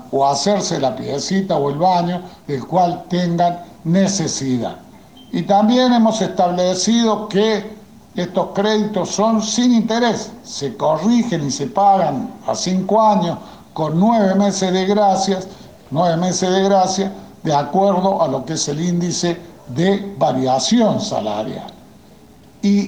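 Low bit depth without dither runs throughout: grainy distortion about 40 dB below the signal tracks the sound, likely from truncation to roughly 9 bits without dither.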